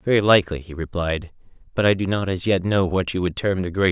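No technical faults can be heard anywhere in this recording.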